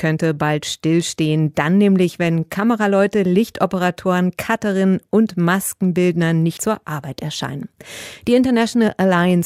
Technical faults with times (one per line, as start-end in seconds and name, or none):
6.57 compressed frames skipped